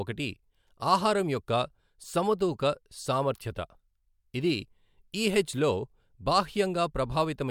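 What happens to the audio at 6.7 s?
Nothing goes wrong at 6.7 s; the audio is intact there, with no dropout, click, distortion or other fault at that moment.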